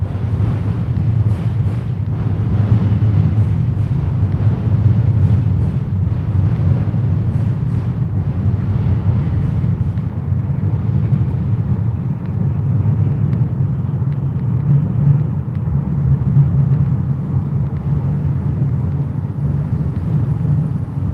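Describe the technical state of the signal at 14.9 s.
Around 14.9 s the signal is intact, with no technical fault audible at that moment.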